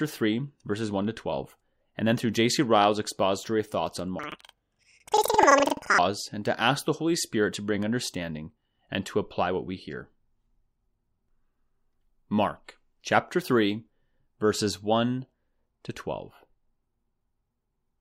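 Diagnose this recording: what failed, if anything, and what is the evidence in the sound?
A sample-format conversion stage read planar audio as interleaved, from 4.19 to 6.00 s, between "expository thoughts on" and "and to ask the". Each 85 ms block, fitting 4096-sample blocks, plays left then right at double speed, so the speech sounds an octave high with an 11.7 Hz flutter.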